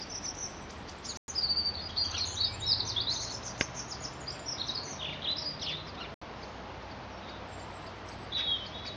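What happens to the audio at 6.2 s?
Right around there, from 6.14 to 6.22 s, the audio drops out to silence for about 73 ms and then carries on. That short gap is the signature of a Bluetooth stall, likely from radio interference delaying packets so the headphones' small buffer emptied before the retransmitted data got through. Playback simply waits rather than glitching, which is why you hear a clean hole in the sound instead of crackle or distortion.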